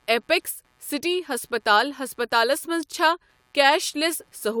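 Throughout the speech, computer activity noise is present. Processor and graphics load shifts the shared ground, causing a faint buzz pulsing near 150 Hz, about 45 dB down.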